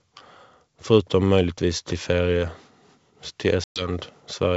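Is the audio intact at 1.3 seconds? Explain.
Yes, the speech at 1.3 seconds is intact, with no fault at that moment, and it carries the wideband telephone sound of G.722 coding at 64 kbit/s.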